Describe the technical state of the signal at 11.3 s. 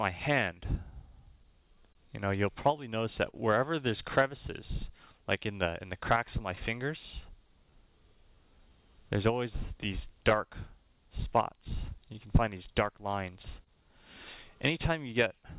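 At 11.3 s the signal carries a clock drift between sender and receiver that runs through the whole clip: the sender's clock runs roughly 2% slow, so the jitter buffer keeps draining and the receiver has to stretch the audio to avoid running empty.

That drift shows up as repeated timing corrections from 0.31 s to 15.29 s. The receiver plays at about 99% speed, adding roughly 150 ms over the span through small, unevenly spaced insertions. These are heard, if at all, as slight hiccups or an unsteady tempo.

The moment also falls inside a stretch of scattered short gaps from 9.84 s to 13.70 s. About seven lost or late packets, the longest around 30 ms, were concealed by extending the preceding sound, roughly 70 ms in total. They come through as brief ticks or smears on audio already band-limited to 4 kHz by the G.711 call path.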